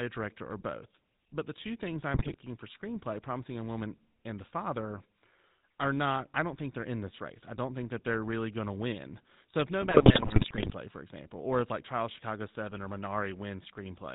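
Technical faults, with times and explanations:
Throughout: GSM full-rate codec. The speech has the plainly audible buzzy, gravelly roughness of the original GSM coder, which points to a rate of about 13 kbps. That coder models the vocal tract as a filter and excites it with a pulse train that keeps only every third sample, so fine detail in the excitation is replaced by a coarse, regular buzz. Nothing above 4 kHz is passed, which leaves the sound narrowband and dull at the top.
2.14–2.36 s and 9.82–10.73 s: GSM bit errors. In these two stretches the decoded speech breaks into squawks, pops and gargling. This is the sound of corrupted bits on the radio link reaching the decoder, at a bit error rate of about 5.0 % in the first stretch and about 4.2 % in the second. Damaged filter, pitch and gain parameters distort the spectrum and throw the level around frame by frame. The second burst is the longer, at about 0.9 s against 0.22 s.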